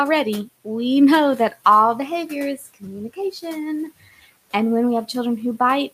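From 2.57 to 2.84 s, right after "know that all behavior", there is speech cut by the noise suppressor: the suppressor mistook quiet speech energy for background and pulled it down with the room noise, by about 14 dB at its deepest. Within that stretch, roughly a tenth of a second of sound comes out swallowed and faint. On a spectrogram the affected bins thin out into dark gaps, and the waveform envelope dips briefly before recovering.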